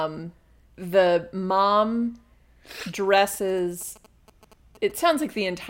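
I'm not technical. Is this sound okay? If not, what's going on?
No. From about 3.34 to 5.48 seconds, a fairly quiet galloping dit-dit-dit of short buzzes sits under the speech. These are GSM signalling bursts: an older 2G mobile phone nearby was briefly talking to its network, and the recording equipment picked up its radio pulses, which buzz at about 217 times a second. Unlike steady electrical hum, this comes in rhythmic clusters and then stops.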